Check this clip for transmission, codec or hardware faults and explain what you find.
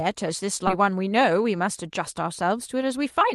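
Two transmission faults. The call codec also limits the band to about 12 kHz.

From 0.67 to 0.69 s there's a skip ahead: roughly 0.7 s of speech got dropped while later audio was queued, so playback jumps straight across with no gap.

From 0.79 to 3.30 s, a jitter buffer speed-up trims short pitch-period chunks, about 150 ms in total. The speech runs 105% fast at the same pitch and feels a bit hurried.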